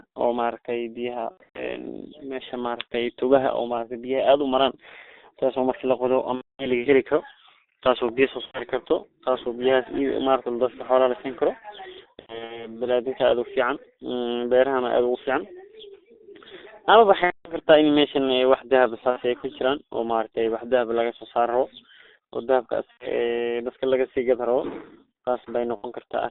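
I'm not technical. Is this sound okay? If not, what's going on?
No. The whole clip passed through the G.723.1 codec, an old internet-phone format that keeps only about 250 Hz to 3.7 kHz, so speech sounds muffled, hoarse and smeared.

There is also VoIP packet loss concealed by the speech codec at 1.31, 6.35, 8.45, 12.21, 17.24, 19.10, 22.91 and 25.76 s. Pieces of the call went missing, up to about a quarter second, and the decoder stretched the last sound into a fading buzz or noise.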